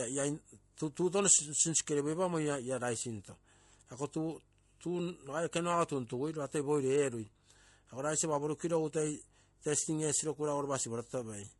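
Throughout, the speech is rough and grainy, likely from low-delay AAC compression (AAC-ELD) at a rate fitting about 32 kbps. Its short frames resolve pitch poorly, so a spectrogram shows blurred harmonic stripes with noise between them and a patchy, synthetic-looking top band.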